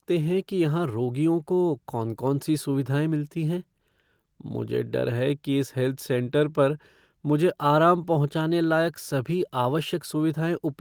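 From the start, the speech carries small, unevenly spaced timing hiccups and a faintly unsteady pace that never settles. This is clock drift between sender and receiver: the sender's audio clock runs about 2% slower than the receiver's, so audio arrives a little too slowly. The receiver's jitter buffer keeps draining, and the playback side has to keep stretching what it has to avoid running dry.

Between 0.15 s and 10.22 s, those hiccups come as repeated timing corrections, all in the same direction. Short pieces of the speech are repeated at irregular points, each too brief to stand out alone. Together they play the speech at 98% speed and add about a fifth of a second over the stretch. The result sounds slightly dragged, with tiny stutters.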